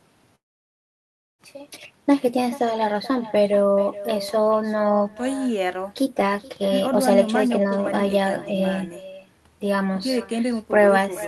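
Echo with no canceller runs through the whole clip: each phrase returns around 0.4 s later as a thinner copy about 14 dB below the speech. The far end's loudspeaker feeds its microphone, and nothing removes that loop before it comes back.

A long network dropout occurs from 0.35 to 1.42 s. The sound stretches into a fading buzz, then goes silent for about a second before resuming further on. This is likely lost packets, leaving roughly a second of audio never played.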